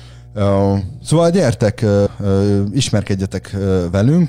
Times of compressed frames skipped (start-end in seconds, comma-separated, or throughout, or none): 2.06